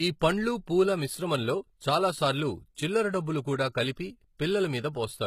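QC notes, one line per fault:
Throughout: HE-AAC compression. The treble sounds bright but synthetic and gritty, with plainly audible damage and nothing above 15 kHz. This is likely HE-AAC at a low rate, consistent with about 20 kbps, where upper bands are copied from lower ones, so harmonics misalign.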